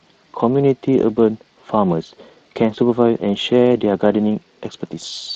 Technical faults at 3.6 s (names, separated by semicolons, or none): Speex codec